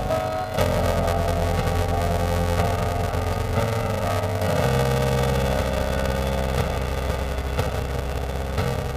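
A robotic buzz near 345 Hz runs throughout, with no clear octave shift: planar audio read as interleaved, its short blocks fitting 128 samples, about 2.9 ms each.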